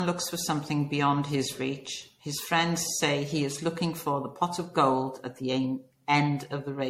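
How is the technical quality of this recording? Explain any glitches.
The quality is noticeably degraded by generation loss, present throughout the speech. It sounds swirly and hollow, with a watery smear over the whole clip. Consonant attacks are blurred. Nothing remains above about 16.4 kHz. The likely cause is repeated MP3 encoding, perhaps around seven passes, at a rate that suggests roughly 62 to 64 kbit/s. Each pass re-quantises the audio on a shifted frame grid. The noise and spectral holes pile up, so the result sounds worse than a single encode at that rate.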